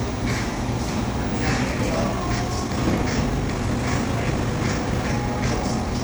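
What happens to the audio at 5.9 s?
At 5.9 s the audio is inside a time-stretched section running from 1.66 s to the end. Software likely sped this part up about 1.51 times while holding pitch by dropping short pieces, so the sound is rushed, its pace jumping abruptly.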